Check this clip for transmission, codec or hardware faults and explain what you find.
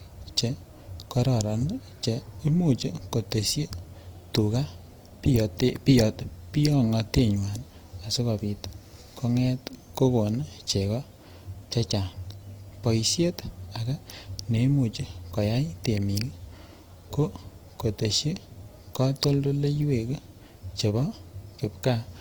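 One codec fault runs through the whole speech clip. It sounds like Opus compression, likely at a low rate around 24 kbps in music mode. Bands starved of bits get filled with folded or noise content. So the voice turns rough and grainy rather than swirly. The damage is plainly audible. Bandwidth stays full, reaching about 20.4 kHz.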